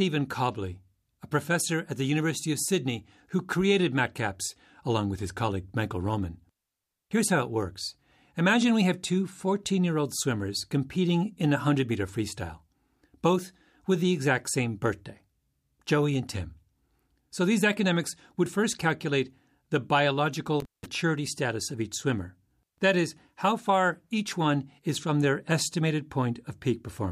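A speech recording with one intermittent contact fault. At 20.60 s the signal drops out, with crackle at the break and again where it returns at 20.86 s. The line stays open for about 180 ms. Faint hiss remains in the gap. The speech resumes just before "status of each swimmer". The cause is a loose cable or plug that briefly lost connection, breaking the signal path.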